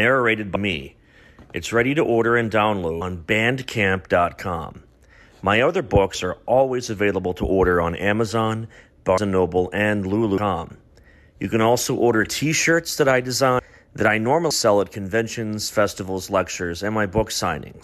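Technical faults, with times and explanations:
0.55, 3.01, 6.14 (just before "are always available to"), 9.17, 10.37, 13.59 (between "that I" and "that I") and 14.50 s (between "that I" and "sell at"): compressed frames skipped. Runs of 26.1 ms frames never play, so the audio jumps ahead by roughly 150 to 500 ms. Overlapping neighbouring frames smear each join into a short blip instead of a click.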